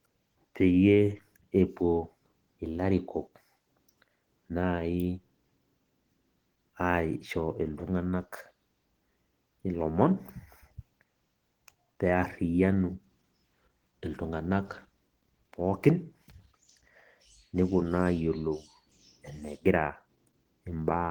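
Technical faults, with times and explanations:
Throughout: Opus compression, heard as a hoarse, grainy roughness on the speech, likely from the codec's hybrid speech mode at a rate near 16 kbps. On a spectrogram, the upper bands look smeared and noise-filled rather than holed, with content reaching 20.2 kHz.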